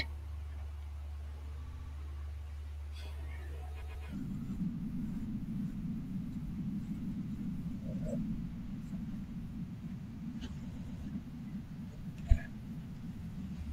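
Repeated frames stutter the speech at 1.66 to 1.91 s, where a 64 ms chunk replays four extra times, and at 3.81 to 4.07 s and 10.74 to 11.0 s, where a 128 ms chunk plays twice more. Each adds about 0.26 s.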